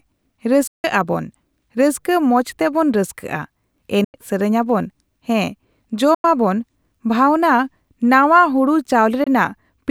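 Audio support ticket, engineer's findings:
Four abrupt silent gaps in the speech, at 0.67 s (0.16 s, before "ᱟᱵᱚᱱ ᱨᱟᱹᱥᱠᱟᱹ ᱢᱚᱸᱡ ᱛᱮᱵᱚᱱ"), 4.04 s (0.09 s), 6.14 s (0.09 s) and 9.24 s (0.02 s). Each shows as a hard-edged vertical blank on the spectrogram and a flat waveform, with the speech resuming as though it had run on. Likely a Bluetooth dropout, with late packets discarded on the link.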